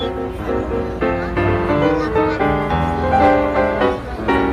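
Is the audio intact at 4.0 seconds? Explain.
Yes, the audio is intact at 4.0 seconds, with no dropout, click, distortion or other fault audible at that point.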